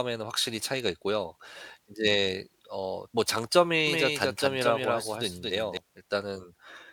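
From 3.87 to 5.77 s, a doubled audio track appears: a second copy, about 5 dB quieter, trails about a fifth of a second behind, likely from a slower duplicate capture path.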